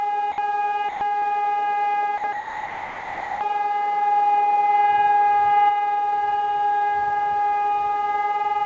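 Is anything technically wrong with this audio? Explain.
Yes. The audio has two kinds of fault, heard through a call path whose codec leaves nothing above 8 kHz, which fits G.722 at 64 kbps.

Sound dropped by the voice detector, at 0.32 to 0.38 s, 0.89 to 1.01 s, 2.18 to 2.24 s and 2.33 to 3.41 s: the sound gives way to flat, steady comfort noise. The likely cause is a sender-side detector misjudging the sound as background and ceasing transmission. On a spectrogram the detail vanishes into a uniform low-level wash, and the waveform shrinks to a thin band.

Short concealed packet loss, from 1.19 to 1.25 s: roughly 30 ms never arrived in time, so the receiver extended the preceding sound to fill the hole and then blended back in, giving a brief smear or wobble. A spectrogram shows smoothed, repeated texture there.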